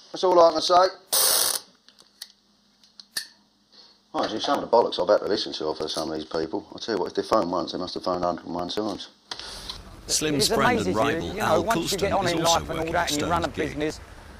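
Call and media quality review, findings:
Periodic USB or driver dropouts, 0.14 s to 14.35 s. Regular ticks recurring every 0.09 s, about 11 per second, roughly 150 in all, heard only while signal is present. Probable component: USB audio interface or its driver, stalled at a fixed interval by a background task. Mechanism: around 10 ms skipped each time, not filled with silence, so the waveform jumps. Fixed spacing rules out network packet loss, which lands irregularly.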